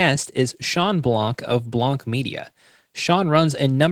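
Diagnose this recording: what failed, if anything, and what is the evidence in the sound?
Codec stage: Opus voice compression runs through the whole speech clip. The hoarse, faintly robotic texture fits low-rate hybrid coding, probably near 16 kbps, with SILK below 8 kHz and coarse CELT bands above. On a spectrogram, the band above 8 kHz looks blocky, smeared in 20 ms steps, and empty above 20.2 kHz.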